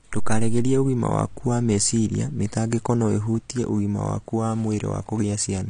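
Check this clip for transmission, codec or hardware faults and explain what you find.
One fault runs through the whole recording. From start to finish the speech sounds dull and smeared, with nothing above 9.9 kHz, a fizzy, warbling edge on sibilants, and plainly audible codec damage. This is likely AAC compression: AAC-LC quantised its frequency lines so coarsely, consistent with a low bitrate around 32 kbps, that it dropped the top band.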